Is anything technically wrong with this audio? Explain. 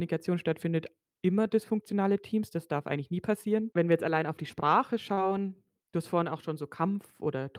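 Yes. At 5.13 to 5.19 s there is short concealed packet loss: 40 ms never arrived, so the receiver extended the preceding sound and blended back, leaving a brief smear instead of a dropout's hard silence.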